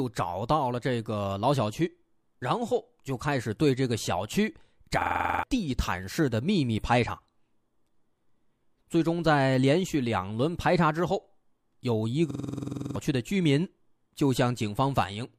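At 5.02 to 5.43 s and again at 12.31 to 12.96 s, a system hang loop occurs: the system stalled while the hardware replayed one 46 ms buffer, consistent with a 2048-sample buffer. That produces a 21.5 Hz machine-gun stutter, looping 9 then 14 times and replacing roughly 0.4 s and 0.7 s of speech.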